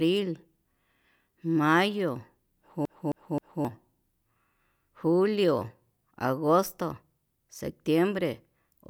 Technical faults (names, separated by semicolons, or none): CD stuck on one turn